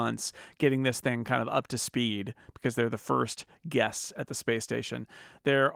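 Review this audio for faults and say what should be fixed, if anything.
No faults; nothing needs fixing.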